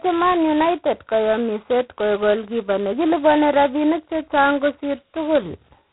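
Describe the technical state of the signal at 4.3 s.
At 4.3 s the speech carries a harsh, rasping hiss that rises and falls with its level, and nothing passes above 3.9 kHz, as throughout the clip. This is heavy G.726 ADPCM damage: coding each sample as a few bits of difference from an adaptive prediction, at a rate that points to 16 kbit/s.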